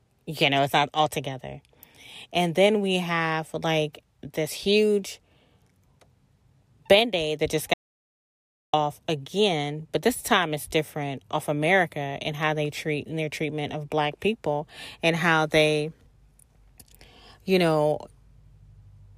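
At 7.74 s, right after "that just", the speech cuts out into an audio dropout to silence. For about one second, until 8.73 s, there is silence with no room tone. The input was likely lost while recording continued. It resumes mid-flow at "again but this time".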